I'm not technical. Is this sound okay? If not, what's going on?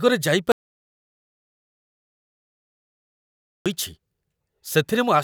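No. The speech cuts out at 0.52 seconds and only comes back at 3.66 seconds. That is an audio dropout to silence. For just over three seconds there is nothing at all, not even the faint background hiss of the room. Whatever was said in that stretch is lost and can't be recovered. The likely cause is that the input was briefly lost, for example through a loose connection or an accidental mute, while the recording kept running.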